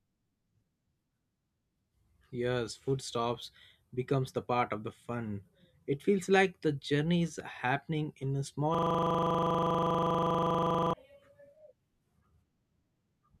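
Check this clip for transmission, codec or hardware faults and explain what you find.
One hardware fault is present: a system hang loop from 8.75 to 10.93 s. The computer or audio driver stalled, but the sound device kept replaying the last chunk it held in its ring buffer. A single 40 ms slice of the speech repeats exactly for about 2.2 seconds, which works out to roughly fifty-five passes. Because the loop is so short, it sounds like a steady 25 Hz buzz in place of speech. The 40 ms period points to a playback buffer of about that length.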